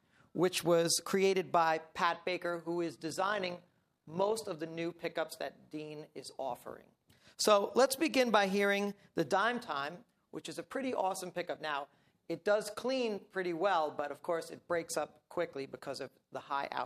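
From 3.1 to 4.32 s there is overlap-add ripple. Frames were rejoined with uneven overlap gain, so level pulses about 6 dB, roughly fifty times a second, giving a rough, robotic flutter.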